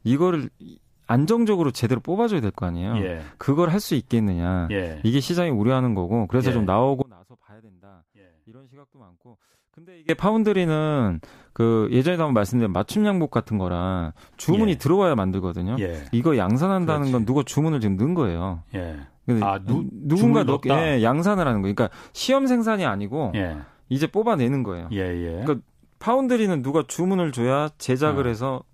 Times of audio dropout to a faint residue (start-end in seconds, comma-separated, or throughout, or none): 7.02-10.09